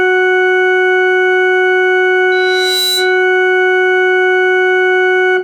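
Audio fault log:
2.31–3.24 s: loudspeaker feedback squeal. A single steady tone at 4 kHz rises out of the music, swelling over roughly half a second until it sits at about the same level as the music itself, then stops. The microphone is hearing the loudspeaker it drives, and at that one frequency the loop gain passes unity, so the tone feeds itself. Unlike a hum or an electrical whine, it is absent at first, grows on its own, and holds one pitch.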